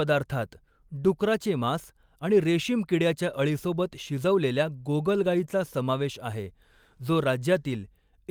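Listening through the speech, nothing stood out as a technical fault at any point.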